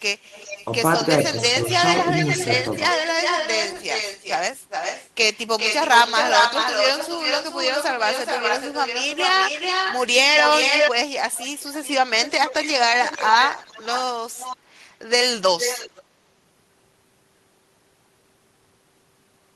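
Echo leak occurs from 0.18 to 0.72 s, 1.19 to 10.91 s, 11.32 to 11.91 s, 12.23 to 12.7 s, 13.01 to 14.0 s, 14.32 to 14.57 s and 15.58 to 16.03 s. A delayed copy of the speech follows it, 0.40 to 0.45 s late, and sits about 5 to 20 dB below it. The likely cause is the far side's loudspeaker sound getting past its echo canceller.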